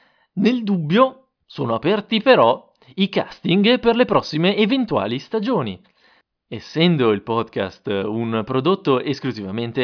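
Speech recording with no audible technical faults anywhere.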